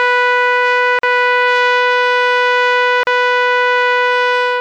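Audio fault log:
0.99–1.03 s and 3.03–3.07 s, gap at a join of encoded pieces: the music drops out for about 44 ms and then 38 ms, with smeared edges, and picks up exactly where it left off. The two holes fall 2.0 s apart. The audio was encoded in separate pieces and butted together untrimmed, so each join keeps the encoder's start-up delay and last-frame padding as an audible gap.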